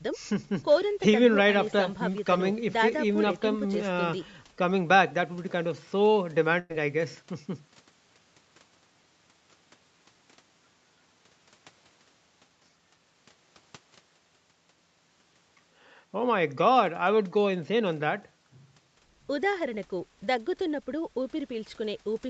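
A burst of packet loss at 6.59 to 6.72 s drops about 100 ms of speech; the receiver stretches and fades the preceding sound across the gap before resuming further on.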